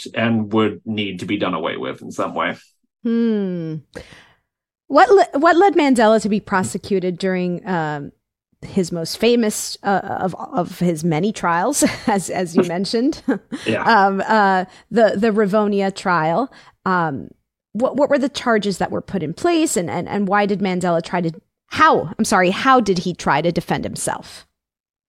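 No technical faults are audible anywhere in the speech recording.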